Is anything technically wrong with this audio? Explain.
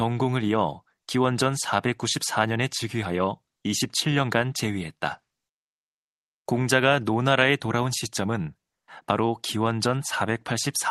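No, nothing's wrong here; it's simply speech that has come through an ordinary call connection, and it sounds just as that kind of audio normally does.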